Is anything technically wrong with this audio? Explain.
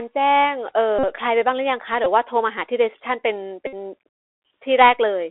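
Yes. The whole clip runs through a Bluetooth CVSD headset codec, which fits a 64 kbps narrowband link. Its one-bit adaptive delta steps confine the speech to roughly 300 Hz to 3.5 kHz, leaving scratchy sibilants and granular hiss.

Bluetooth headset packet repeats occur at 0.99–1.05 s, 2.04–2.07 s and 3.67–3.74 s. Lost packets were refilled with the previous packet's bits, so each gap of about 49, 15 and 60 ms becomes a brief buzz near 267 Hz.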